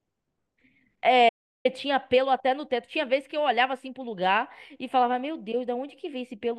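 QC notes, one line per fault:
1.29–1.65 s, audio dropout to silence: the input likely disconnected or muted briefly while the recorder kept writing silence, so the speech cuts off abruptly mid-flow and returns after about 0.36 s of silence with no room tone, that stretch of speech lost.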